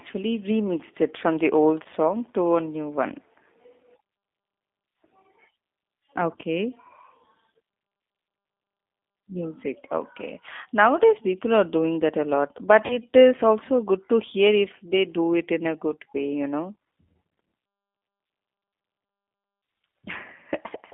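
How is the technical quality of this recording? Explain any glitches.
Technical quality is limited by narrowband codec coding throughout, with two brief dropouts.

The whole recording has a G.729 codec sound: band-limited to roughly 250 Hz to 3.6 kHz, with plainly rough, synthetic-sounding speech, which fits an 8 kbit/s G.729A stream modelling the vocal tract and pitch.

From 1.83 to 1.87 s and from 12.86 to 12.98 s there is VoIP packet loss concealed by the speech codec. About 20 ms and then 40 ms of audio went missing, which points to one lost packet and then two. The decoder extrapolated from its last pitch and filter state, stretching the sound into a short buzzy tone or coloured noise that fades, and the sound stays weak or distorted for a moment after each dropout.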